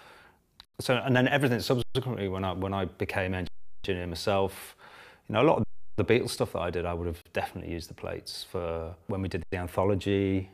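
Six underruns with held sample cut the sound at 0.65, 1.82, 3.47, 5.63, 7.22 and 9.43 s, holding flat for 40 to 370 ms. The converter freezes on its last value, then playback resumes where it stopped, so each dropout ends softly. The 93 ms gaps fit a 4096-sample buffer.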